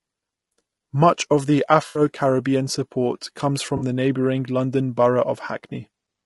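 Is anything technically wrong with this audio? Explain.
Yes, there are two problems. Low-delay AAC compression throughout the speech: the rough, grainy texture, noise between the harmonics and the synthetic-sounding top band likely come from AAC-ELD's short frames, which resolve pitch harmonics poorly and, at a rate that fits around 32 kbps, starve the spectrum of bits.

AAC frame loss with concealment at 1.87 to 2.01 s and 3.77 to 3.83 s: about 80 ms and 40 ms of data went missing, and the decoder rebuilt it from the last good spectrum, so both gaps come through as brief smeared, noisy, phasey patches rather than clean sound.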